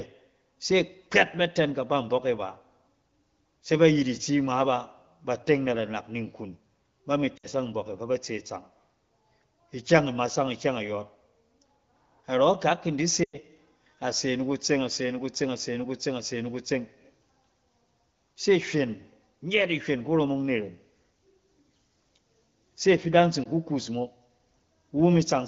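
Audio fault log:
7.37–7.47 s, 13.23–13.38 s, 23.43–23.48 s, lost AMR speech frames: the decoder reuses the last good sound and lets it fade, dropping to near silence within two frames rather than cutting off abruptly, which sets it apart from a clean dropout. The 0.1 s gap at 13.23 s is the longest, and the shortest sounds like a single missing 20 ms frame. Wideband AMR coding at 15.85 kbit/s keeps the speech clear outside these gaps.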